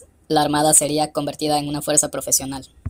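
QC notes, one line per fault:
throughout wrong sample rate: speech runs 1.38 times fast and 5.55 semitones high, fitting 32 kHz audio played at 44.1 kHz; spectrogram harmonics stretched upward, waveform squeezed.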